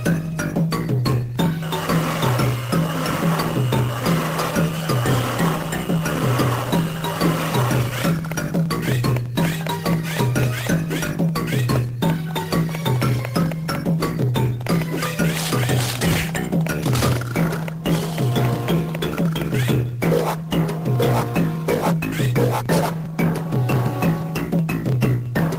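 No technical faults can be heard at any point in the recording, and the signal holds steady throughout.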